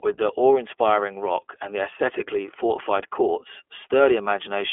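Speech, passed throughout through the iLBC codec, whose independently coded 20 ms frames fit its 15.2 kbps mode, leaving a narrowband, slightly rough, synthetic tone with nothing above about 3.6 kHz.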